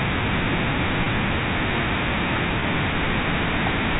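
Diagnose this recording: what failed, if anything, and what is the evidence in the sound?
Network-stage packet loss with pitch repetition, at 1.04 to 1.06 s and 2.60 to 2.62 s. Each gap is about 20 ms, which fits one lost 20 ms packet. The receiver looped the last pitch period, producing a brief held, buzzy tone. On a spectrogram, the harmonics below the 4 kHz G.711 ceiling freeze into flat horizontal lines. The waveform shows identical repeating cycles.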